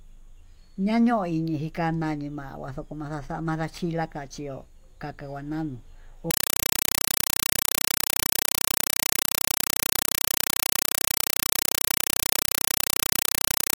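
Speech runs normally until about 6.31 s, just after "kaka nguananu", where it gives way to very loud chattering static that lasts to the end, a compressed stream played as audio. The AC-3 data is being treated as ordinary samples instead of being decoded, so each frame arrives as a short burst of noise followed by digital silence. On a waveform this shows as loud blocks about 5.33 ms long, repeating 31.25 times a second with flat gaps between them. On a spectrogram it shows as broadband vertical stripes at that rate, which fits a 256 kbps Dolby Digital stream.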